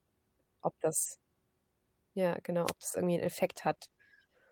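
At 2.65 to 2.73 s the radio link of an analogue FM wireless microphone faded briefly, most likely as reflected signals arrived out of phase and cancelled the direct one. With the carrier weakened, the receiver's own noise rose above the audio. This wireless microphone noise hit is heard as a short swish of static, roughly 80 ms long, laid over the speech before the signal returns to strength.

From 3.25 s to the end of the clip the call's bandwidth estimate dropped and the encoder was told to spend far fewer bits. The sound points to a fall from about 48 kbps to around 15 kbps, held for the final 1.26 s. This call bitrate drop makes Opus code the speech more coarsely and trim its upper frequencies, so the voice turns muffled and watery, with a rough, grainy edge.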